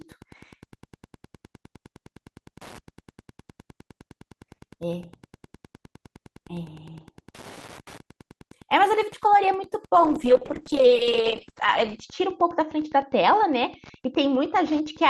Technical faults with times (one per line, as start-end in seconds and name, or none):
0.00-15.09 Wi-Fi interference
9.96-15.09 call bitrate drop